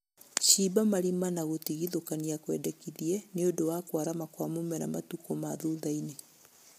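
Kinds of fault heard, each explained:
low-delay AAC compression: present throughout the clip, with plainly audible coding damage that leaves the speech rough and grainy, with noise filling the gaps between pitch harmonics. The likely cause is AAC-ELD, the low-delay codec used for video calls, at a rate that fits about 32 kbps. Its very short frames keep delay low but resolve harmonics coarsely, so at this bitrate the codec cannot hold the voice's fine structure cleanly.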